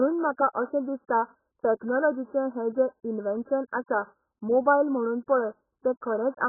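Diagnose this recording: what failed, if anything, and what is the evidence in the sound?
Codec stage, likely AAC compression at a very low bitrate: throughout, the speech stops at 1.7 kHz and sounds smeared, unlike a clean low-pass filter.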